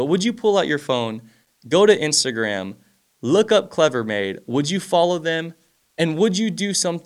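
At 1.43 s, right after "pull out your phone", a burst of loose connector crackle runs until 1.59 s, just before "go to". A worn or dirty contact is making and breaking as the cable shifts, chopping the signal on and off. Unlike evenly spaced digital clicks or buffer dropouts, this scratching is ragged and irregular in both spacing and level, which points to a physical contact fault.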